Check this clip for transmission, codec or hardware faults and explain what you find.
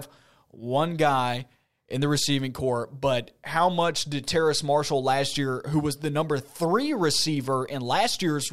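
One fault runs through the whole clip: sample clock jitter. The converter's clock wanders by roughly a microsecond and a half, so samples land early or late, producing an error around 35 dB below the speech. It is heard as a hiss or roughness that grows on loud, bright syllables and disappears in the pauses.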